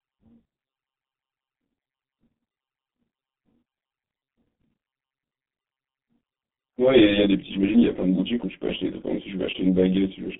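From the first moment to the end, the speech sounds rough and slightly doubled. This is channel delay (comb filtering): one channel runs late by something like 20 ms, and when the two are summed to mono the shared content cancels at regularly spaced frequencies, starting down around 20 Hz and repeating up the spectrum as a dense row of fixed notches.

Across the whole clip the speech is also muffled and hoarse, with consonants that smear into one another. This is the G.723.1 codec at heavy damage. Its sound fits a bitrate of about 6 kbit/s. The useful band sits between 150 Hz and 3.5 kHz, nothing passes above 3.8 kHz, and the coarse 30 ms frames update the voice model too slowly to follow quick changes in the speech.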